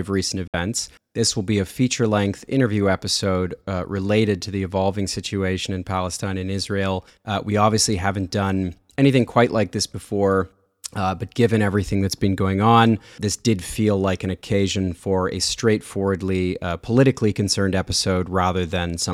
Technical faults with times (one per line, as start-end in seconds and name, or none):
0.47-0.54 Bluetooth dropout